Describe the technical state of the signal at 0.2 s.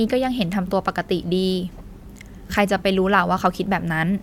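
At 0.2 s the signal is intact, with no dropout, distortion, glitch or other technical fault audible at that point.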